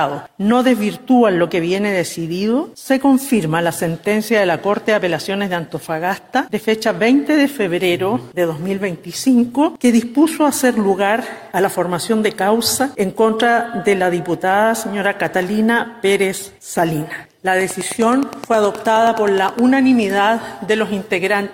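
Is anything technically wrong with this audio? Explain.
Yes. From 17.61 to 19.60 s there is a train of clicks. About twenty sharp pulses arrive at a regular 9.6 per second. Each has much the same shape. They stand well above the audio, roughly 10 dB over it. Something is injecting a repeating pulse into the signal path. The likely cause is interference from nearby equipment or a faulty connection or power supply. It is heard as steady ticking laid over the sound, carrying on through any gaps.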